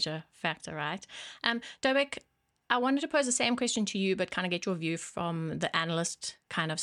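No technical faults can be heard in this speech recording.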